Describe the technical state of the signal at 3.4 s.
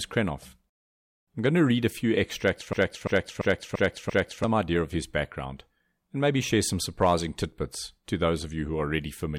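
At 3.4 s you're inside a system hang loop running from 2.73 to 4.44 s, right after "read a few extracts". The system stalled while the hardware replayed one 341 ms chunk, which fits a 16384-sample buffer, five times at about 2.9 Hz. It's a choppy machine-gun stutter, and roughly a second and a half of audio is lost before "idea of his background".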